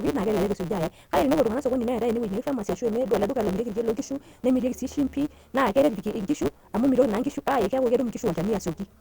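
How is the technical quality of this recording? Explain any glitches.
The technical quality is poor throughout. A block size mismatch (truncated) runs across the whole recording. One stage writes longer blocks than the next reads, which fits 512-sample blocks, so each block's tail is dropped. That leaves a 150 Hz buzz, and the speech runs 1.6 times fast at about normal pitch.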